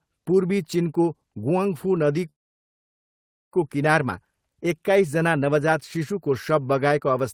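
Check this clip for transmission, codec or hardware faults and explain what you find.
One fault is present, a call audio freeze in this speech from 2.29 to 3.55 s. The sound stalls briefly, then falls silent for about 1.2 s and resumes where it stopped, so nothing is lost but everything after arrives about 1.23 s late. Packets were likely held up until the jitter buffer ran dry. A spectrogram would show a short smeared stretch, then a blank band; the waveform would show a flat gap.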